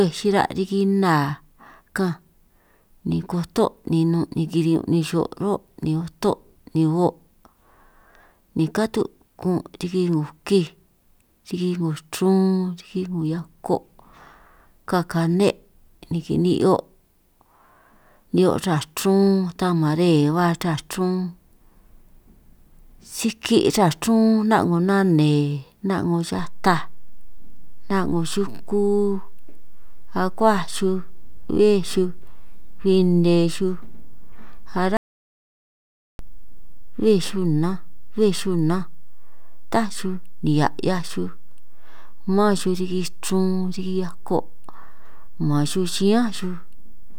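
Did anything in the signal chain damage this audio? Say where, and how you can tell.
Yes. At 26.39 s the converter or analogue input introduces a DC step: the waveform's zero line jumps to a new offset, as happens when a converter recalibrates or an input carrying an offset is switched in. That shift comes through as a single low thump or click at 26.39 s. The offset then holds through to the end of the clip rather than stepping back or decaying, while the speech itself carries on unchanged over the displaced baseline.

From 34.97 to 36.19 s there is an audio dropout to silence, about 1.22 s where the input was lost and the recorder kept writing silence, likely from a disconnected device, a failed link or a stray mute at the input stage. The speech cuts out mid-flow and the gap is silent with no room tone left underneath, which separates it from a pause. Whatever was spoken in that stretch is gone, and the speech resumes abruptly at 36.19 s.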